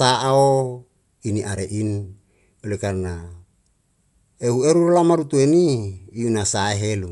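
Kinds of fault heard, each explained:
Dolby Digital compression: The whole speech clip carries the dull, band-limited sound of a likely low-bitrate AC-3 style encode, with nothing above roughly 11.6 kHz, which fits something around 64 kbps. At that rate the encoder drops the top of the spectrum and gives many frequency lines no real bits, so the decoder fills them with noise. You can plainly hear it as a muffled top end and a rough, fluttery grain hanging around the voiced tones.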